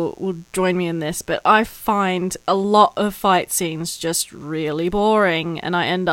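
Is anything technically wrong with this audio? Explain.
Yes. Mains buzz runs through the whole speech clip. Switching spikes from a dimmer, rectifier or poor shielding enter twice per 60 Hz cycle. Their harmonics climb into the kilohertz range. The result is a steady, raspy buzz, quiet beneath the speech, roughly 40 dB down.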